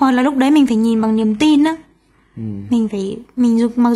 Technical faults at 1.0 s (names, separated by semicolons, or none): adaptive stream at a lower bitrate